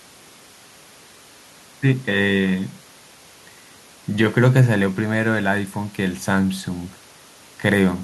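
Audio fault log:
No technical faults are audible anywhere in the speech, and the signal path holds steady across the whole recording.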